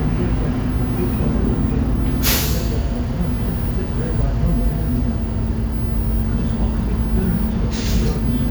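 Nothing in these sounds stood out as a technical fault on listening.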